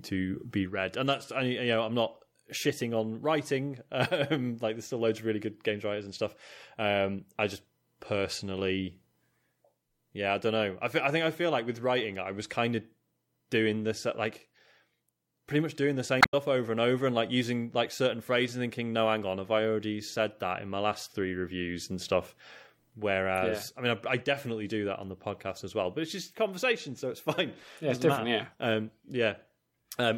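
Speech recording with a short garbled blip from 16.18 to 16.34 s, caused by damaged data in the compressed stream: corrupted frames made the decoder misread and resynchronise.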